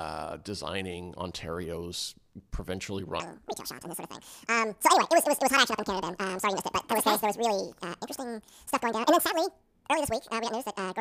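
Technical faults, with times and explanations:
3.20–11.00 s, audio read two samples at a time (double speed): from 3.20 s to the end, the speech plays at twice its proper rate and one octave (12 semitones) higher. This points to a reader consuming each pair of samples as a single frame, as if the stream were stereo or its samples twice as wide, so every second of material passes in half a second. Components pushed above the available bandwidth fold back down.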